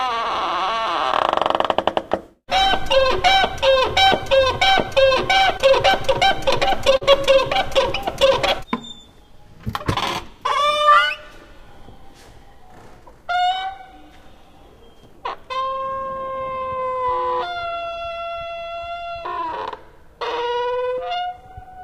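Short concealed packet loss occurs at 5.57 to 5.61 s and again at 6.97 to 7.03 s. Both times a stretch of the stream, about 20 ms and then about 40 ms, failed to arrive in time for decoding. The receiver covered each hole by extending the preceding sound and then crossfading back into the real signal. The first is a brief smear. The second, longer patch comes through as a brief smeared wobble in the sound.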